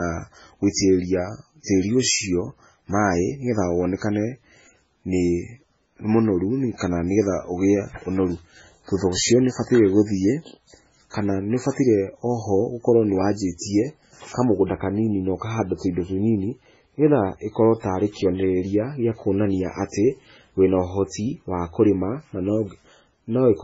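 Throughout the clip, the speech carries heavy damage of the kind likely caused by MP3 compression, with nothing above 7.6 kHz, which fits a very low bitrate of around 16 kbps. Short of bits, the encoder has cut the treble at that fixed point and dropped quieter frequency components, which flicker in and out between frames. The result is a watery, swirling texture, with metallic chirps on s sounds and smeared consonant attacks.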